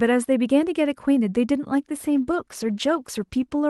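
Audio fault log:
2.01–3.70 s, call bitrate drop: partway through, the speech coarsens into a rougher, more watery texture. Before the drop it carries detail up to about 12 kHz, and afterwards that top end is duller. The sound fits the Opus encoder being pushed from around 48 kbps to about 18 kbps after its bandwidth estimate fell, forcing coarser coding and a lower cut-off. It holds at its worst for 1.42 s and does not recover before the clip ends.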